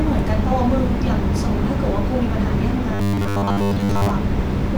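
From 2.94 to 4.10 s the speech takes on robotic sound from repeated short buffers: a rigid, metallic 100 Hz buzz that loosely tracks the words. It likely comes from a 10 ms block being looped while most of the real audio is skipped. A spectrogram shows flat harmonic stripes spaced 100 Hz apart, and the waveform shows near-identical 10 ms cycles.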